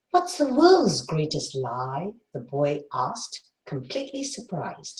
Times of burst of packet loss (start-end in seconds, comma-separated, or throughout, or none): 3.37-3.46